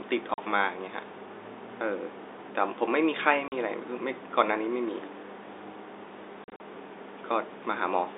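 A speech clip on a narrowband telephone line (about 300 Hz to 3.7 kHz) is broken by packet loss filled with silence. There are hard-edged 40 ms gaps at 0.34 s and 3.48 s, then 100 ms of dropouts scattered between 6.44 and 6.60 s. The gap lengths fit 20 ms packets.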